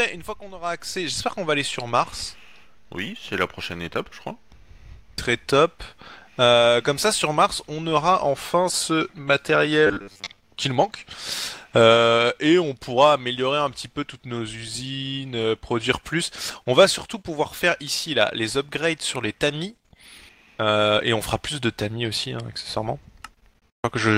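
From 9.87 to 10.37 s the sound turns robotic, a sign of repeated short buffers. A rigid metallic buzz at 100 Hz comes in. That fits a 10 ms chunk being replayed. The likely cause is late audio, with about half the stretch filled by repeats.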